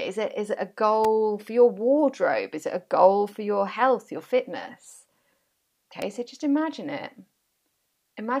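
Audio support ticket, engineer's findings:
Electrical switching spike: sharp snaps on top of speech at 1.04 s (between "it is it a" and "for your wardrobe") and 6.02 s (before "so just imagine it"), peaking near -15 dBFS. Likely nearby switch or motor arcing coupled into the line.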